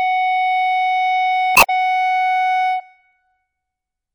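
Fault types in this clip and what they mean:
Damaged data in a compressed stream: Part of the encoded music data is corrupt between 1.53 and 1.70 s. The decoder misreads those frames and loses its place. It hunts for the next valid frame header. The result is a brief chirp, squawk, click or short hole.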